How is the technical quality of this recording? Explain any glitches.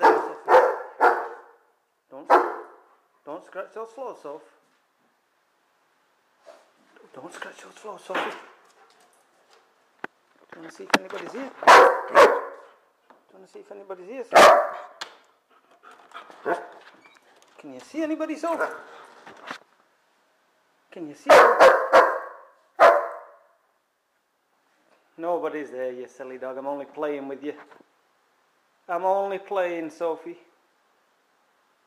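No technical glitches can be heard anywhere in the recording, and the signal stays steady and continuous throughout.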